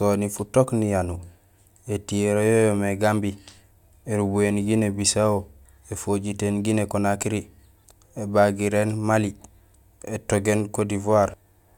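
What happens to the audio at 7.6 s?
Nothing goes wrong at 7.6 s; the speech there plays through intact, with no dropout, click or distortion.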